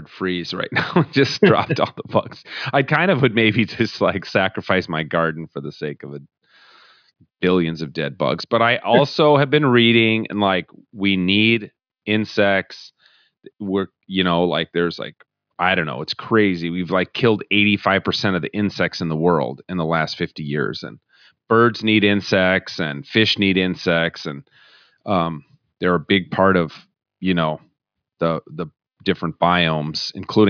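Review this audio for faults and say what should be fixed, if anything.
Nothing here needs fixing, since no technical faults turn up anywhere in the recording.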